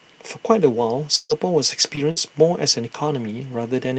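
At 1.15 s a burst of packet loss begins: several packets in a row failed to arrive in time, so about 140 ms of the sound is missing. The receiver extends the last sound across the gap and fades it, giving a held buzz or dimming hiss that drops to brief silence before the audio resumes further on at 1.32 s.

Just before that resumption, from 1.29 to 1.31 s, comes a lost packet rebuilt from error correction. A low-bitrate copy carried in the next packet replaced the missing 20 ms, so there is no gap, but that stretch sounds rougher and noisier.

At 1.95 s a short concealed packet loss occurs. About 20 ms never reached the decoder, and 14 ms of it was filled by continuing the previous sound, which produces a quick smear or wobble through 2.00 s. Inside it, from 1.97 to 1.99 s, another lost packet was rebuilt from error correction, adding a grainy 20 ms.

A second burst of packet loss runs from 2.11 to 2.19 s. 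About 60 ms is lost and 54 ms of it is bridged by a fading continuation of the last sound. Within this burst, 2.16 to 2.18 s is again a lost packet rebuilt from error correction, heard as a coarse patch.

The Opus call path itself limits the audio to 8 kHz, which is its normal bandwidth.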